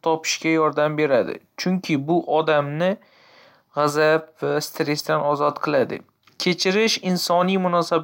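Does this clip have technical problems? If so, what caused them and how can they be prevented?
No, the speech signal holds steady throughout with no audible technical faults, so there is nothing here that needs preventing.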